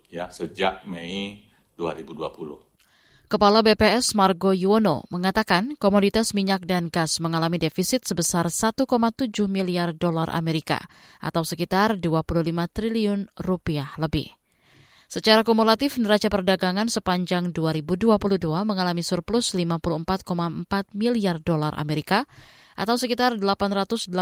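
No technical faults can be heard anywhere in the speech recording, with the signal holding steady and intact throughout.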